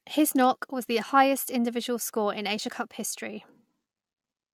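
No technical faults can be heard anywhere in the recording.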